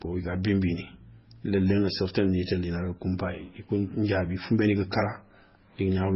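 Throughout the speech, the audio was likely passed through more than one lossy codec, with the artefacts pointing to a very low-rate MP3 encode around 16 kbit/s followed by an Opus encode near 32 kbit/s. This transcoding between lossy codecs stacks the damage: nothing survives above 5.6 kHz, so the speech sounds muffled and dull, while the smeared, swirly MP3 artefacts remain and the second codec adds its own graininess on top.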